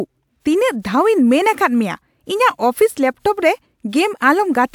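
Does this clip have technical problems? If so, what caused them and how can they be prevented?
No, this speech clip has no technical faults to point to. With nothing going wrong, there is no cause to trace and nothing to prevent.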